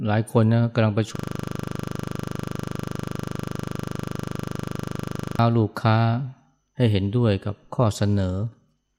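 A system hang loop runs from 1.16 to 5.39 s: playback froze, replaying one 40 ms piece of speech 106 times, a rapid 25 Hz repetition.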